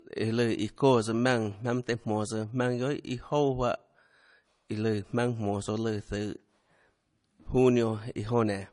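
From start to finish, the speech carries layered coding damage: nothing is present above 10.5 kHz, and the artefacts of two different codecs are heard together, stacked on each other. This is likely transcoding between lossy codecs, which fits a low-rate MP3 pass followed by AAC-LC. The second encoder spent its bits reproducing the first one's errors and added its own, while the lowest cut-off in the chain survived.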